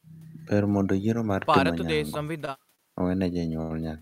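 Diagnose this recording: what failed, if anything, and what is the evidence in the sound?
Short stalls from late packets occur at 2.45 to 2.49 s, 2.75 to 2.81 s and 3.62 to 3.72 s, a network-stage fault absorbed at the jitter buffer. Each time a packet missed its slot, the buffer ran dry and the receiver held the last bit of speech for 20, 33 and 87 ms, then resumed where it left off. Nothing is lost, but each hold adds that much delay, so the final one gives the longest drag.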